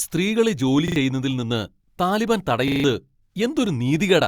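At 0.88 s and 2.68 s, a repeated buffer stutters the speech: late audio makes a 40 ms chunk replay twice, then four times, seen as identical blocks with sharp vertical joins.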